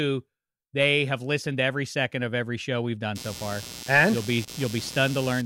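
A speech recording with computer activity noise entering at 3.15 s, just after "of every show we've", and running to the end of the clip. It is a buzzy, chirping texture pulsing at roughly 100 Hz, sitting around 15 dB below the speech, and it follows the machine's workload rather than the talker. Load swings in the processor or graphics card are disturbing the ground shared with the audio circuitry, and that ground movement is reaching the signal path.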